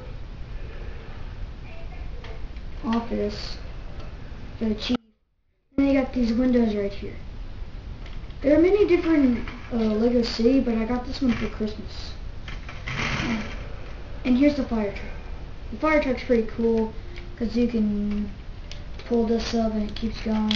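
The signal was likely lost for about 0.83 s while the path behind the break stayed live, giving an audio dropout to a faint residue from 4.96 to 5.78 s. The sound cuts out abruptly and only a faint sound remains, roughly 35 dB down.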